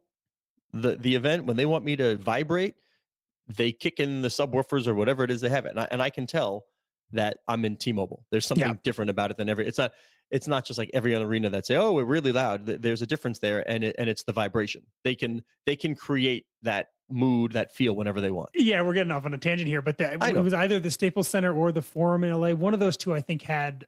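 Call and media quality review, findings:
No faults found on this speech recording, nothing here needs attention or a fix on the call or media path.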